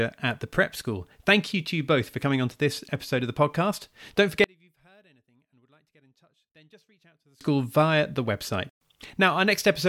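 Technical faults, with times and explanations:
4.44 to 7.41 s, one channel inverted: speech falls about 36 dB before "via the website". One channel likely has reversed polarity, cancelling the shared centre.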